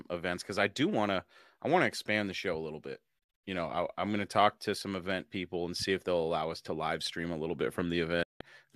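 Speech with two digital broadcast dropouts: after "show a little bit" the sound breaks into short silent holes between 3.19 and 3.44 s, the longest 72 ms, and after "stream a little bit" it mutes from 8.23 to 8.41 s. Each gap fades in 8 ms to clean silence rather than sinking into hiss like a weak analogue signal.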